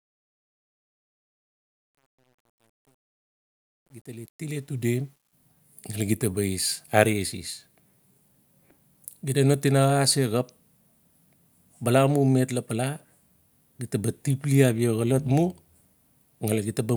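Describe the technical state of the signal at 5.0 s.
At 5.0 s the signal is still inside the truncation distortion on the fade-in, which runs from the start to 5.33 s. The worst grit lies before 4.46 s. By 5.0 s the level is high enough that the coarse steps are less exposed. A rough edge remains, consistent with only about 10 bits being kept without dither. On a waveform the low-level stretches show stair-stepped shapes. A spectrogram shows a hazy broadband grain over the rising sound.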